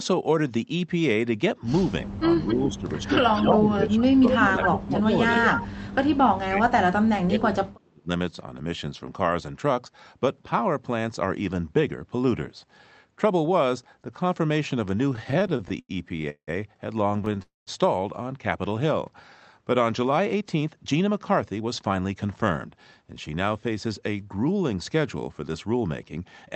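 From 2.01 to 5.33 s the speech is pulled down in level in stretches adding up to about two seconds, with the deepest dip near 15 dB. This is speech suppressed in double talk, most likely an echo canceller that could not separate its near-end talker from loudspeaker echo while both sides spoke, so it attenuated everything. The voice sinks and thins in pieces.

Overlapping that span, an echo leak appears from 2.47 to 3.9 s, again from 4.32 to 5.02 s and from 5.35 to 5.67 s. A copy of the speech trails the original by 256 ms, only a few decibels below it. The likely cause is a far end on loudspeaker whose echo canceller left residual microphone pickup that was sent back down the line. It is heard as a distinct delayed doubling of the voice, not a short room reflection.

A second, heavier suppression runs from 6.13 to 8.09 s, with dips reaching about 35 dB. That is deep enough that parts of the speech nearly vanish. 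The cause is likely the same double-talk behaviour, with the canceller clamping hard while the other side talks.

Repeated stalls (stutter) begin at 15.13 s and last to 16.49 s. Sixteen short gaps are filled by extending the last sound, totalling 441 ms, or about a third of that stretch, and the longest wait is 178 ms. A shorter burst follows from 17.09 to 17.38 s, with seven tiny gaps of about 11 ms each. Packets arrived late again and again, the jitter buffer kept running dry and the receiver stretched the audio each time. Nothing is lost, but the speech drags and hiccups.

A call audio freeze follows at 17.42 s and runs to 17.69 s. The receiver holds the last sound briefly and then fades to silence for 160 ms, before the audio resumes where it left off. The inserted gap adds 245 ms of delay. A transient network hold-up is the likely cause.

From 20.18 to 22.25 s a jitter buffer speed-up plays the speech at about 109% of its normal rate. 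Short pitch-period slices, around 200 ms in total, are removed to drain the excess buffer. The pitch stays put, but the talker sounds rushed.

Throughout, the Opus call path limits the audio to an 8 kHz bandwidth.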